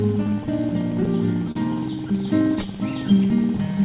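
The sender's clock runs a few percent slower than the receiver's, a clock drift between sender and receiver that keeps draining the jitter buffer through the whole clip. To stay in step, the receiver makes repeated timing corrections from 0.03 s to 3.74 s, repeating small slices so the audio plays at 98% speed and stretches by around 70 ms overall, heard as faint hiccups and a slightly dragging tempo. At 1.51 to 1.57 s a late packet left the buffer empty, a short stall from a late packet: the last sound is held for an extra 39 ms before playback resumes from the same point, with nothing lost. The audio arrives through a G.711 mu-law call path with nothing above 4 kHz, which fits a 64 kbps narrowband link.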